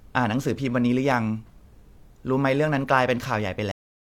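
Speech, with a cut-off end at 3.72 s: the sound stops mid-utterance and falls straight to digital silence for the remaining 0.38 s. Unlike a fade-out or a natural ending, there is no decay or room tail, because the final buffers were never written.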